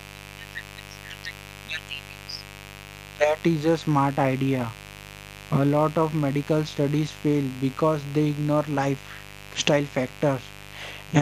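Mains buzz runs through the whole speech clip, from start to finish. Sharp switching spikes from a 50 Hz supply, arriving twice per cycle, leak into the signal and stack up harmonics into the kilohertz range, giving a steady, raspy buzz sitting about 20 dB below the speech.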